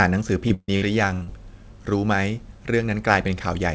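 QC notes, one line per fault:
0.48–1.29 s, repeated packet loss (robotic sound): five dropouts in quick succession, the longest 140 ms, with roughly 40% of that stretch patched by stretching the previous sound forward, so the speech goes choppy with chunks missing.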